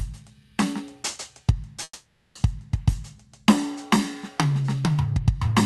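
At 1.83 s the music stalls in a call audio freeze that lasts until 2.37 s. The last moment of sound is stretched into a fading buzz for about half a second, then goes silent for roughly 40 ms before the music resumes exactly where it stopped, now running about 0.52 s late, with nothing lost. Packets were likely held up in transit, draining the jitter buffer. A spectrogram shows smeared, repeating bands decaying into a brief blank column, and the waveform shows a shrinking envelope. Throughout the clip, content tops out near 12 kHz, as expected from the Opus call path.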